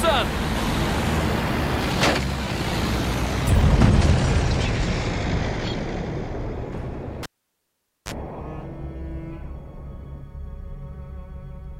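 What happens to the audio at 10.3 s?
Nothing goes wrong at 10.3 s; the audio plays through that moment intact, with no dropout, click, distortion or other fault.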